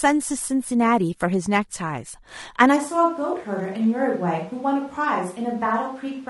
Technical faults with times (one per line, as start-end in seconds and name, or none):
0.00-6.29 low-delay AAC compression
2.78-6.29 switch to a distant microphone